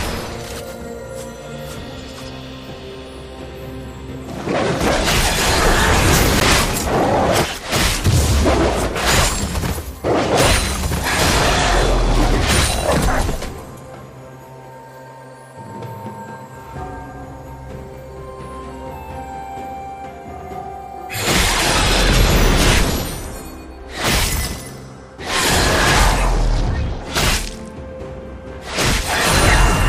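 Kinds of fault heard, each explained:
Block of digital silence: a single sharp tick at about 6.4 s, where the sound drops to silence for roughly 12 ms and snaps back with no fade. The hole fits a 512-sample buffer that the program failed to fill in time.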